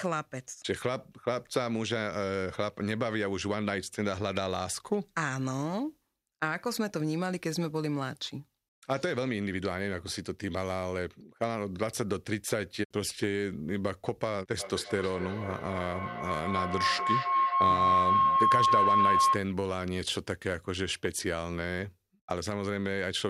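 Speech clip with feedback howl from 14.6 to 19.55 s. A tone near 1 kHz builds, the loop repeating roughly every 0.3 s, peaking about 7 dB above the speech. Two devices sharing the call in one room form a microphone-to-loudspeaker loop that gains level each pass until broken.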